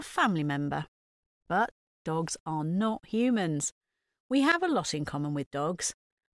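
Speech, with nothing technically wrong with it.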